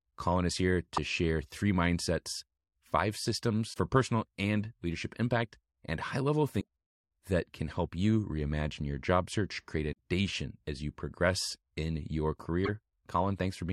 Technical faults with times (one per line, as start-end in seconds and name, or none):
0.95-0.98 damaged data in a compressed stream
3.70-3.77 damaged data in a compressed stream
6.57-6.64 damaged data in a compressed stream
12.64-12.69 damaged data in a compressed stream